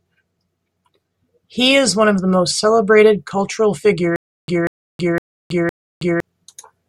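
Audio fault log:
4.16–6.20 s, stutter with silent gaps: from 4.16 s the speech stops advancing and a single fragment of about 189 ms plays four times, each burst followed by about 322 ms of dead digital silence, so the pattern recurs every 511 ms until 6.20 s. This likely comes from a stalled player or stream that replays its last buffered chunk on each retry and then runs dry. The speech that belonged in this stretch never plays. A waveform shows four identical blocks separated by flat silent stretches, and a spectrogram shows repeated matching slices with fully black gaps between them.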